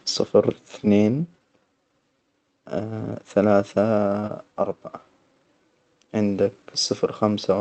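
Speech over what sounds like a call link: the top end stops at about 8 kHz and there's the light coding grain you'd expect from Opus at something like 32 kbps. Two quick glitches sit close together just past four seconds. First is a short stall from a late packet at 4.19 to 4.25 s. A packet showed up late, the jitter buffer ran dry, and the receiver held the last bit of sound for roughly 38 ms until it arrived, then picked up right where it left off. Nothing's actually missing there. You just hear that moment stretched, with a faint buzzy hold, and everything after it lands about 38 ms later than it should. Right behind it, at 4.27 to 4.31 s, comes a short concealed packet loss. This time about 20 ms of audio never made it to the decoder, so the receiver papered over the gap by carrying the previous sound forward and then blending back into the real signal. That leaves a brief smear right there, and since the fill stands in for real audio, whatever was in those 20 ms is gone.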